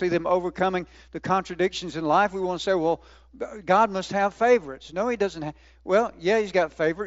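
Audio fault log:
Nothing stood out on listening to this speech clip, which comes across as speech carried over a wideband Bluetooth headset link.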